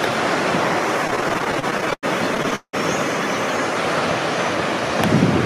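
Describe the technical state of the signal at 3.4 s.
At 3.4 s the signal is intact, with no audible technical fault at that point.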